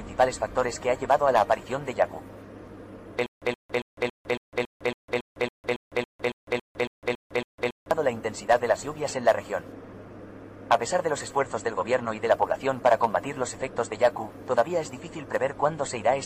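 From 3.26 s to 7.91 s there is a stutter with silent gaps: a 123 ms fragment plays, then about 155 ms of dead digital silence follows, and the cycle repeats 16 times at a steady 278 ms period. This is likely a stalled player or stream that replayed its last buffered fragment on each retry and then ran dry. The audio that belonged in that span is missing, not delayed.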